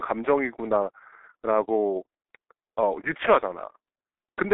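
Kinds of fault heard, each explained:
G.723.1 codec: The speech runs through an early internet-telephony codec at about 6.3 kbit/s, working in coarse 30 ms frames. Nothing above 3.8 kHz survives, so the sound is muffled. The slow voice model leaves it hoarse, and consonants smear together.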